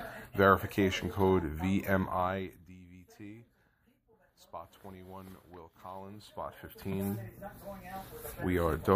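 From 2.04 to 2.8 s the level falls about 20 dB in unsmoothed 1 dB steps, roughly thirty a second. Each step clicks, giving zipper noise, a fast ticking. From 5.92 to 7.36 s a similar rise steps at about fifteen a second, ticking more slowly.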